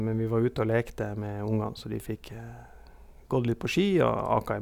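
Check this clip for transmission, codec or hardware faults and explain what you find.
Nothing faulty can be heard in this speech recording.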